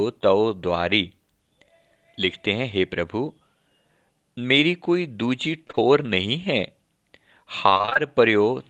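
From 5.67 to 5.79 s, three short concealed packet losses land back to back, each about 20 ms of missing speech filled by extending the preceding sound before blending back. The result is a single brief smear or wobble rather than a broken texture, which sets it apart from the later stretch. From 7.69 to 7.97 s, repeated packet loss produces robotic sound. Seven gaps, the longest about 21 ms, leave roughly half that span patched, so the concealment never settles. Because it keeps restarting, it sounds choppy, with pieces missing, rather than smeared. Both happen on a call path whose top end stops near 12 kHz, which fits Opus at about 24 kbps.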